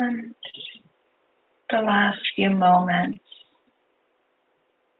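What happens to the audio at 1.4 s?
Nothing goes wrong at 1.4 s: the audio carries on intact through that moment, with only the ordinary character of a call codec and no dropout, glitch or break.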